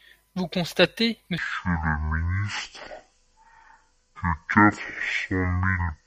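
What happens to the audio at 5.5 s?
At 5.5 s the speech sits inside a section at the wrong speed, running from 1.38 s to the end at half speed, likely from playback against the wrong clock. It sounds deep and drawn out, roughly ten semitones lower. A spectrogram shows harmonics squeezed downward and stretched in time, and the waveform's cycles widen.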